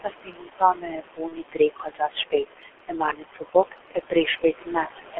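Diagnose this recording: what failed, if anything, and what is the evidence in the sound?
Noise suppressor artifacts (call processing): the room noise, about 9 dB below the speech, drops by about 17 dB between phrases. On a spectrogram the noise floor appears as patchy, flickering blocks.

G.723.1 codec: heavy muffling and hoarseness, with nothing below 300 Hz or above 3.4 kHz. This fits a roughly 6 kbit/s stream. A spectrogram shows a hard band edge and smeared formants.

Speech cut by the noise suppressor: soft sounds go faint during 0.01–2.11 s (down about 19 dB), 2.31–2.71 s, 3.13–3.55 s and 3.91–5.19 s. On the waveform, the word tails are clipped into sudden dips.

VoIP packet loss concealed by the speech codec (network): at 1.28–1.35 s the speech smears into a buzzy tone or coloured noise that fades. This fits a single lost 30 ms frame. A spectrogram shows a frozen spectrum that decays.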